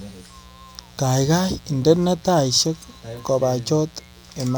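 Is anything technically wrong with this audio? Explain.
Yes. Mains buzz runs throughout the speech: switching spikes at 60 Hz mains give a raspy buzz roughly 30 dB down, seen as evenly spaced harmonic lines up into the kilohertz range.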